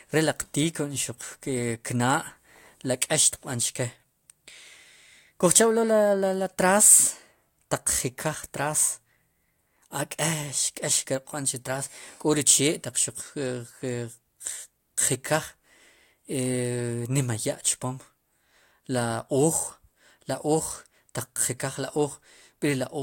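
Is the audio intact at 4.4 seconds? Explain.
Yes, the speech at 4.4 seconds is intact, with no audible fault at that moment.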